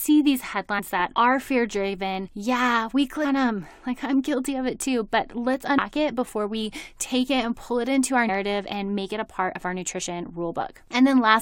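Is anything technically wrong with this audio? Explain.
Yes. The speech has compressed frames skipped at 0.78–0.80 s, 2.26 s, 3.24 s, 5.77 s and 8.28 s. At each point whole blocks of the encoded stream never reach the output, so the audio jumps forward by roughly 150 ms, with closer to 200 and 300 ms lost at 5.77 and 2.26 s. That fits several 23.2 ms frames being dropped. Each seam is heard as an abrupt jump ahead in the speech. On a waveform or spectrogram, syllables change abruptly at each join, with no gap.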